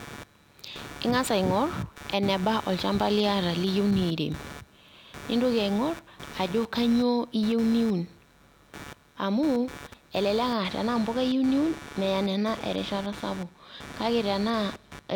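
A speech recording with two faults. Computer activity noise runs through the whole clip. It is a buzzy, chirping layer that pulses at roughly 150 times per second. It sits fairly high, perhaps 15 dB below the speech. It does not follow the talker. It rises and falls with something else. That points to a computer's load changes disturbing the ground shared with the audio circuit. Processor, graphics or mouse activity would do it. From 10.57 s to the end there is channel delay, heard as comb filtering. One channel lags the other by about one sample, a few hundredths of a millisecond. When the two are folded to mono, shared content cancels at regularly spaced frequencies. With so tiny an offset, the first notch lands near 20 kHz. The result is a slight dulling and loss of air at the very top, not obvious hollowness.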